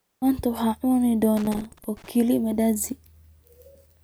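A worn or dirty contact made and broke repeatedly from 1.37 to 2.09 s, chopping the speech into an irregular burst of loose connector crackle just before "kaliya mandazi".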